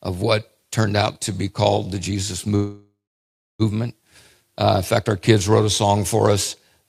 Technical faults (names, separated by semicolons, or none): call audio freeze